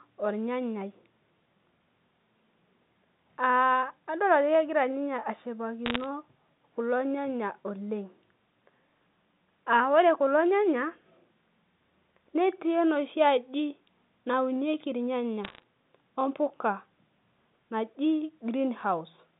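Speech on a telephone-band line crackles with sharp ticks at 5.86–6.06 s, 15.44–15.63 s and 18.79–18.83 s: bit errors on a digital phone line, flipping bits at a fraction of a percent.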